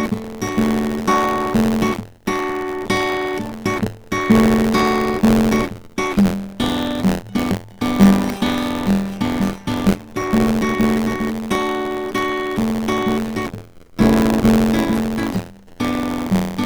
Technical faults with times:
0.00-16.65 buffer tearing

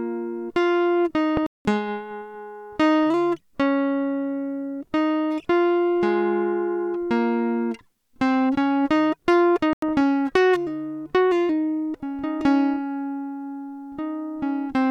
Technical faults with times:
1.37-1.65 corrupt frame muted
9.73-10.00 corrupt frame muted

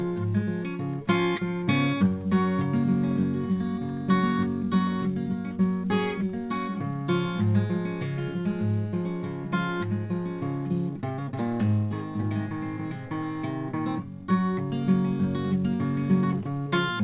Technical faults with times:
none

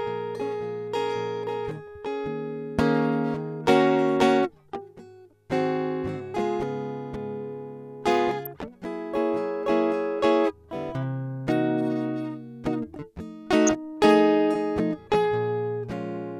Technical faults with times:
8.45-8.52 DAB burbling
13.67-13.71 DAB burbling

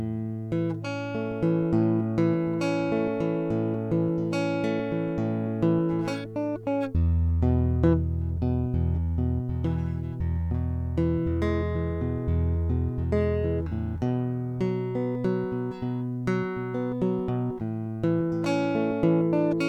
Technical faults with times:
none

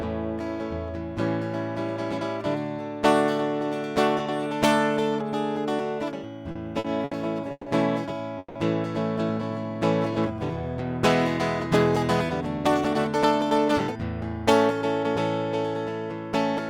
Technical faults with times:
6.51-7.14 short stall from a late packet
7.51-7.69 call audio freeze
8.38-8.58 call audio freeze
9.42-10.63 jitter buffer slow-down
12.45-13.88 jitter buffer speed-up

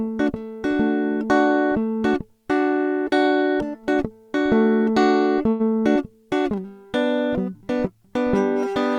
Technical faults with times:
5.49-5.62 call audio freeze

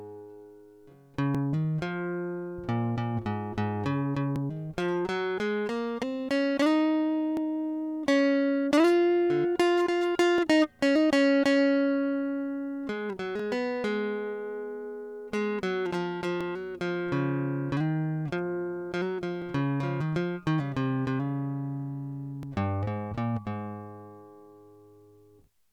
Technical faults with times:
1.35 overlapping chunks
4.36 overlapping chunks
7.37 overlapping chunks
10.38 overlapping chunks
13.39 overlapping chunks
16.41 overlapping chunks
19.42 overlapping chunks
22.43 overlapping chunks
25.44 overlapping chunks

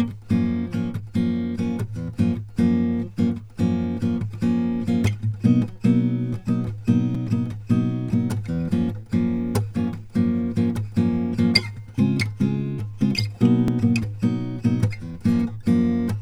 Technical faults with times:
7.15 repeated buffer
13.68 repeated buffer

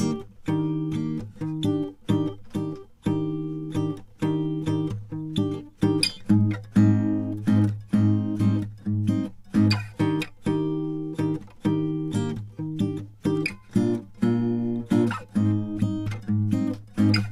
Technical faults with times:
none

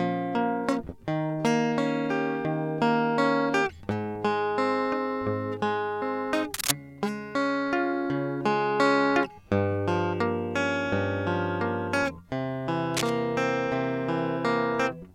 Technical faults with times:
6.54-6.71 cable scratch noise
12.94-13.10 cable scratch noise

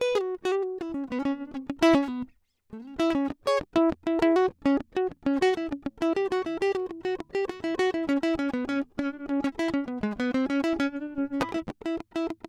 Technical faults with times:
none

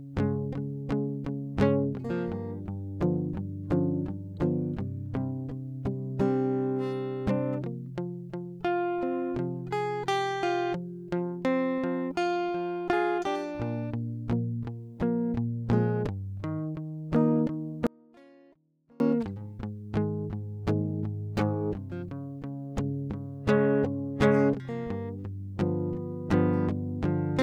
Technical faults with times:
17.87-19.00 audio dropout to a faint residue

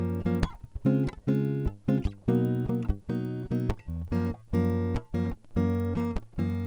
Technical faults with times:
0.00-6.67 resampler restarted on every block

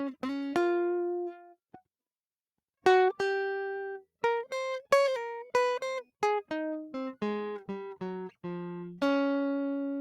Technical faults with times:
1.33-1.56 sound cut by the noise suppressor

